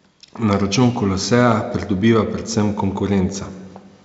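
No technical faults can be heard in this speech recording.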